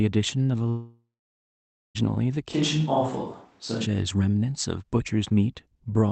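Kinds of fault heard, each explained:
Long network dropout: Audio stopped arriving over the connection for well over a second, likely an interruption in the network, so about 1.26 s of the speech was never delivered. From 0.69 s the receiver stretches the last sound into a fading buzz, and for most of the gap, about 0.9 s, only silence remains. The speech resumes at 1.97 s further along, with the missing portion simply absent rather than delayed.
Switch to a distant microphone: From 2.54 s to 3.84 s the recording switches abruptly to a pickup much further from the talker, likely because the close microphone's signal dropped out. The voice turns hollow and roomy, with thinner bass, while its loudness stays roughly the same. A faint background noise, far below the speech, becomes noticeable. At 3.84 s the close, fuller sound snaps back just as suddenly.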